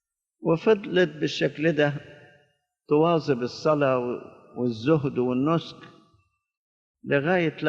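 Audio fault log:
Nothing to log here; the audio comes across without any technical faults to report.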